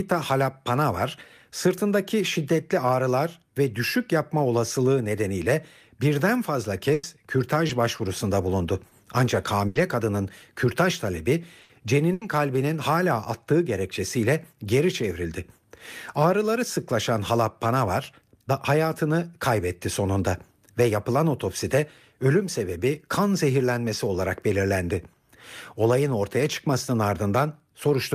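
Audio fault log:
6.93–7.05, 9.67–9.77, 11.63–11.71 and 12.13–12.23 s: burst of packet loss. Several packets in a row arrive too late or not at all. The gaps last 100, 80, 60 and 80 ms. The receiver keeps extending the last bit of speech and lowers it as the gap grows. A voiced sound turns into a brief held buzz. Other sounds become a fading hiss. The speech then resumes later, with the lost stretch gone.
7.67–7.71, 7.97–8.01, 8.89–8.93 and 11.59–11.63 s: short concealed packet loss. About 20 ms of speech misses the decoder each time. The receiver patches the hole by continuing the preceding sound. It follows the pitch on voiced parts and uses shaped noise elsewhere, then blends back into the real signal. Each patch is heard as a quick smear or wobble. The last one runs straight into the 11.63 s burst.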